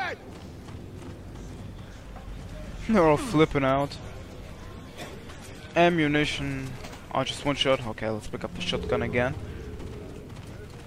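No faults are audible anywhere in the recording.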